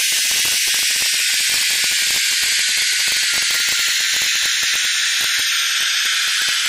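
A gain or summing stage pushes the signal roughly 3 dB past the integer limit throughout the clip, and instead of being held at full scale, the samples that exceed it wrap around to the opposite extreme. That integer overflow touches only a tiny fraction of the audio, around one sample in two thousand, but each wrapped peak jumps across the entire range. The result is sudden, violent cracks on the loudest moments, far harsher than ordinary clipping.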